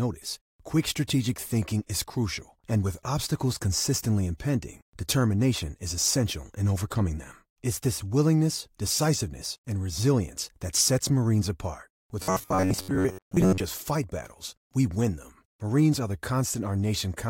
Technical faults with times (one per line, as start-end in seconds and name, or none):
12.21-13.60 robotic sound from repeated short buffers